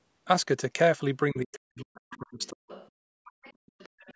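A short speech recording where the talker's voice collapses between 1.32 and 2.70 s, dropping by as much as about 40 dB across roughly a second of that span. This is speech suppressed in double talk, likely because the echo canceller heard both sides at once and turned everything down. On a waveform the envelope pinches into thin gaps. A spectrogram shows the energy fading in patches, with the upper bands thinning. The spectrogram's content stops at 8 kHz throughout, as expected from the call's microphone processing.

The other side's voice also leaks through: brief fragments at 1.53–1.59, 2.11–2.17, 2.39–2.47 and 2.70–2.90 s, then a longer stretch from 3.26 to 4.14 s. They sit roughly 20 to 30 dB below the talker, with the faintest near 2.4 s. The likely cause is loudspeaker echo that the canceller failed to remove. These appear as faint, separate harmonic traces under or between the main speech bands.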